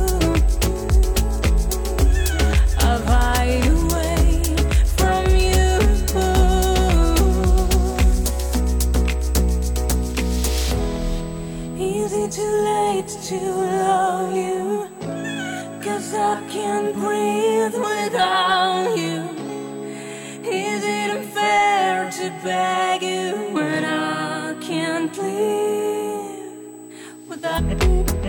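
A steady high-pitched whine at 8 kHz sits under the audio throughout, roughly 30 dB below the signal. This is USB whine, from the bus's 125-microsecond microframes leaking in through power or ground. Near the end, between 27.54 and 27.60 s, the sound abruptly jumps ahead with a small blip, most likely a stream segment skipped after it failed to load.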